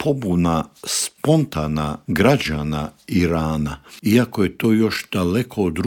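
Nothing goes wrong anywhere in the audio, so there's no technical fault to point to here.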